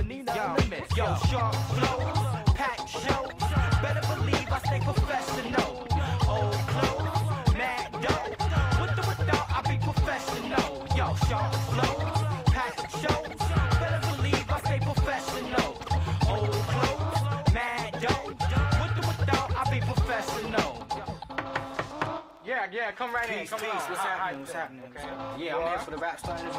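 No technical faults can be heard anywhere in the audio, and the signal stays steady and intact throughout.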